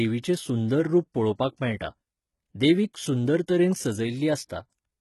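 From start to finish the speech carries heavy HE-AAC compression damage, likely from coding at a very low bitrate, around 16 kbps. Nothing reaches above 11.8 kHz, yet the top octave is still present because it has been rebuilt from copied lower bands rather than coded directly. The difference from plain low-pass filtering is that the treble is present but false: s sounds come out gritty, lispy and metallic, with harmonics that fail to line up above the crossover.

At 4.49 s a pre-echo appears: a brief hiss, about 12 ms long, arrives just ahead of a sharp onset. The codec spread quantisation noise sized for the loud attack across its whole transform block, so that noise also fills the quiet instant before the attack and leaves the onset softened and smeared. Unlike a click or dropout, it is a short wash of noise that leads into the attack instead of breaking it.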